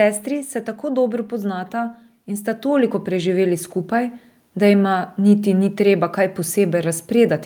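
Speech, affected by two gain faults. From 0.05 to 0.88 s there is automatic gain falling. The gain control judged the input too loud and pulled its gain down by about 4 dB. The voice and its background sink together over that stretch. From 1.7 to 4.22 s there is automatic gain rising. The control judged the input too quiet and raised its gain by about 7 dB. Voice and background swell together slowly, over roughly two and a half seconds.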